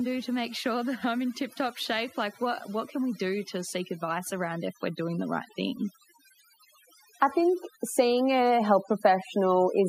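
Speech, processed throughout with overdone noise removal: bands near the noise estimate are cut away, leaving a lowered background that breaks up into twinkling specks. After "that I'm in tip", automatic gain rising lifts voice and background together by about 7 dB from 1.57 to 5.87 s, then again by about 4 dB from 7.33 to 9.84 s, as the gain control responds to a quiet input.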